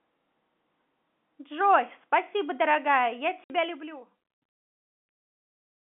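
At 3.44 s the speech drops into a 60 ms hole, ending at 3.5 s: packet loss filled with silence. The gap fits three 20 ms packets, with hard edges.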